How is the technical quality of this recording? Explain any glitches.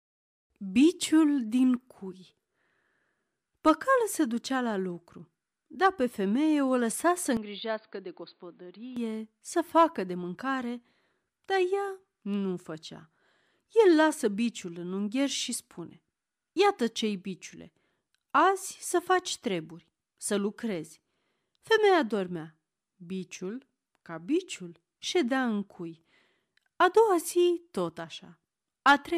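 One clear glitch affects this speech recording. An input switched to a poorer device from 7.37 to 8.97 s. For that stretch the signal likely came through a different microphone or a headset's call profile, a path with a narrower band and its own character. Nothing above 4.8 kHz gets through, so the speech turns dull and boxy, drops roughly 5 dB in level and picks up a faint new background noise well beneath it. The sound then clears again, with no gap at either switch.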